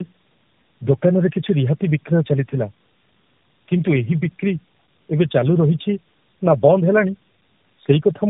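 Tandem speech coding runs through the whole speech clip: the signal appears to have crossed three low-rate speech codecs in a row, consistent with G.729A followed twice by AMR-NB, each recoding the previous one's losses, so the voice sounds rough, muffled and warbly, with nothing above 3.8 kHz.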